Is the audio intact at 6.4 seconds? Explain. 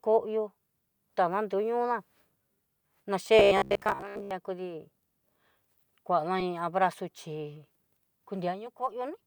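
No. At 6.40 s about one 10 ms compressed frame is skipped, so the speech jumps ahead by about 10 ms at the join.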